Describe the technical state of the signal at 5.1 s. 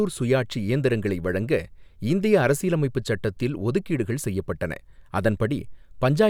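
At 5.1 s the speech comes through intact, with no dropout, clipping, glitch or other technical fault at that point.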